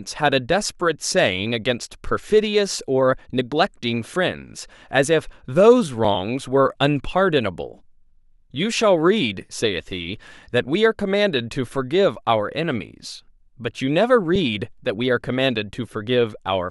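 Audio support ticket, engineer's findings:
Underrun with held sample at 6.05 s and 14.36 s: output buffer ran dry, converter held last value for about 2.7 ms (fits a 128-sample buffer); speech resumes where it stopped, softly.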